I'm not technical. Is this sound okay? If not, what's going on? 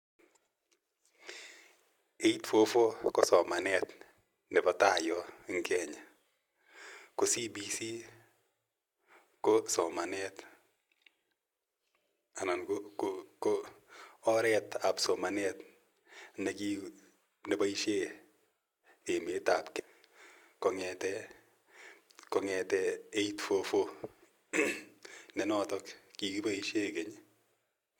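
No. A stream segment skipped at about 19.79 to 19.85 seconds. In that brief moment the speech jumps abruptly forward, with a small blip where the two pieces meet, as if a bit of the recording had been cut out. The likely cause is that the audio arrived over the internet in small chunks, one chunk failed to arrive, and the player moved straight on to the next, leaving a gap in what was said.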